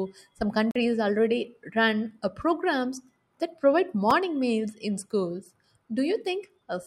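At 0.71 s the speech drops out in a block of digital silence lasting about 44 ms, ending at 0.76 s. The samples are replaced by zeros with no fade, so the signal cuts off and returns abruptly, leaving a short hole. A second, much shorter block occurs at 4.11 s, between "uh programs that provide" and "meals in schools". At roughly 4 ms it is too brief to be heard as a gap and comes across as a single tick.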